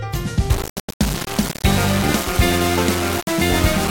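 From 0.5 s to the end at 3.9 s, the sound turns gritty and grainy, with error only about 10 dB down. It's likely low bit depth without dither, roughly 3-bit rounding.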